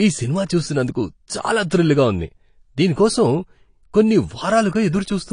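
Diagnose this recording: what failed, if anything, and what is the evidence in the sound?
The codec stage is at fault throughout the speech. Nothing remains above 10 kHz, and the damage is plainly audible: the top end is dull and smeared, and sibilants take on a shifting, fizzy warble. That points to lossy transform coding starved of bits, likely AAC compression, which fits AAC-LC at around 32 kbps. A plain low-pass filter or resampling stage would remove the top just as cleanly, but it would not leave this unstable, watery texture.

The codec stage also produces a pre-echo from 4.88 to 4.93 s, a hiss about 42 ms long that comes just before a sharp onset and softens its attack. The onset falls late in a transform block, so quantisation noise sized for the loud part spreads back over the quiet moment before it. Because the hiss comes before the transient, it is not a room reflection or a later echo, and its noisy smear rules out a click.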